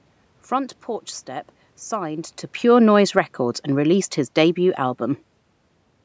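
In this speech clip, right after "signed to", the level sinks steadily from 2.64 s to 5.06 s, dropping about 4 dB, and the room noise behind the voice falls with it. That is automatic gain falling: the gain control judged the input too loud or its background noise too strong and eased its gain down over those seconds. The shift in the voice's distance around 2 s is the talker moving, not part of this fault.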